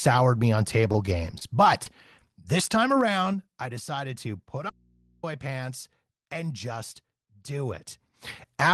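From 0.81 to 1.46 s, just after "me on", the call's receiver ran into repeated packet loss: audio went missing again and again, and each hole was patched by stretching the sound that came before it. What sounds like six separate holes, the longest about 26 ms, add up to around 81 ms of invented audio, roughly an eighth of that stretch. The result is a choppy flutter in which small pieces of the speech are smeared over.

A moment later, from 1.84 to 1.87 s, there is a short concealed packet loss. About 20 ms of audio never arrived in time for the decoder, so the receiver filled the gap by continuing the last sound before blending back into the real signal. It is heard as a brief smear or wobble rather than a clean break. The call path itself is Opus, with the high end rolling off around 12 kHz.

Between 2.52 and 3.76 s, leading into "to put", the level is pulled down by about 10 dB. The gain moves in unsmoothed steps of 3 dB, about three per second, instead of as a continuous ramp. 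Each jump puts a small discontinuity into the waveform, so a faint ticking zipper noise rides on the speech while the level falls.

From 4.70 to 5.23 s, right after "to put" and before "pants and just do", the speech cuts out abruptly for about 0.53 s and then cuts back in. The gap holds only mains hum, about 35 dB below the speech. This is likely an audio dropout to a faint residue: the wanted signal was lost while the path after the break stayed live. It sounds like a hard hole with hum in it, not a pause or a fade.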